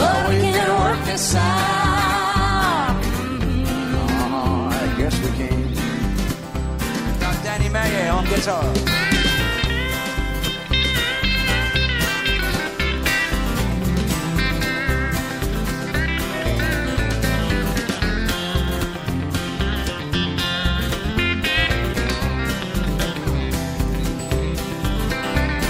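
For the first 6.0 s the adaptive stream starts at a low bitrate: dull, artefact-heavy treble, consistent with about 16 kbit/s, then an abrupt, gapless jump to fuller quality. From 11.97 to 13.74 s come CD scratch ticks, eight evenly spaced clicks, the longest a couple of milliseconds, whose regular rotational rhythm distinguishes them from random crackle.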